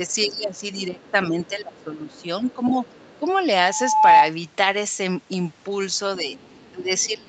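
Speech over a call, with the echo canceller likely struggling during double talk, so the talker's speech is suppressed in double talk from 0.0 to 3.25 s and from 6.18 s to the end. The level dips in patches, at deepest by about 20 dB, for about two seconds in total in the first stretch. The same imperfect echo cancellation likely lets the other side's voice leak through, faintly, at about 30 to 35 dB below the speech: brief scraps at 0.09–0.15 s, 0.57–0.61 s and 1.01–1.11 s, then longer from 1.44 to 3.32 s and 6.35 to 7.06 s. Between 3.57 and 4.32 s, the microphone picks up its own loudspeaker and the loop's gain exceeds one at 865 Hz, producing a loudspeaker feedback squeal: a steady tone that swells over roughly half a second to about 10 dB above the speech.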